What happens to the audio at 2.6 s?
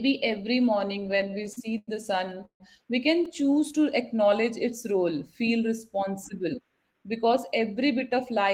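Repeated stalls (stutter) run from 2.25 to 2.62 s: packets arrived too late, so the jitter buffer emptied five times and the receiver stretched the last sound to bridge 186 ms, about half that stretch, longest 148 ms. Nothing is lost, but the speech drags and stutters.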